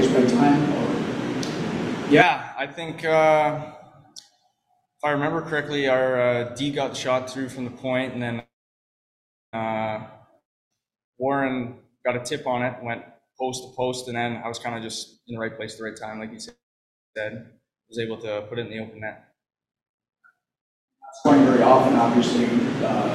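From 8.39 to 9.55 s there is a call audio freeze, likely from packets held up in transit that starved the jitter buffer. The last sound is stretched into a brief fading buzz, then about 1.04 s of near-silence. The audio resumes exactly where it stopped, adding about 1.14 s of delay.

At 10.39 to 10.72 s a long network dropout occurs. A short decaying fill gives way to roughly 0.3 s of silence, and the audio returns 320 ms further on, with that stretch lost.

From 13.81 to 16.28 s a jitter buffer speed-up drains the excess backlog by repeatedly removing pitch-period-sized slices. Playback runs at 114 % with pitch unchanged, audibly hurried, shedding around 0.3 s.

A second call audio freeze follows at 16.49 to 17.17 s: a 0.67 s gap, mostly silent for 0.59 s, with nothing missing afterwards.

A milder jitter buffer speed-up from 19.01 to 21.09 s runs at 108 %, trimming roughly 0.2 s.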